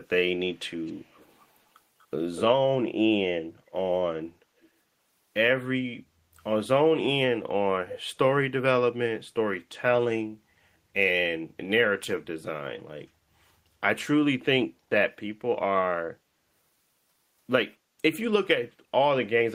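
Echo leak at 0.51 to 1.41 s, then in short scraps at 1.99 to 2.06 s, 2.36 to 2.42 s, 4.62 to 4.66 s and 7.9 to 7.98 s in this speech clip. A faint copy of the speech trails it by 243 ms, mostly very quiet, about 30 to 35 dB down, but louder at 2.36 s and 7.9 s, around 15 dB below. The likely cause is a far-end loudspeaker whose echo canceller let part of the returned signal through.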